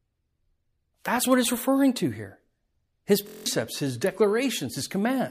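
A speech recording with a system hang loop from 3.27 to 3.46 s. A 23.2 ms slice of audio repeats exactly eight times while the hardware keeps cycling its buffer, which fits a 1024-sample buffer. At a 43.1 Hz loop rate this sounds like a brief buzz, not a stutter, and about a fifth of a second of real audio is lost. The waveform shows one identical cycle copied back to back. The spectrogram shows a harmonic comb spaced 43 Hz apart.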